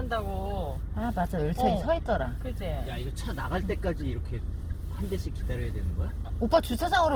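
Throughout, tones turn grainy and rough, likely from Opus compression at a low rate; a spectrogram shows full-band content to 20.2 kHz, with upper bands noise-filled rather than gapped.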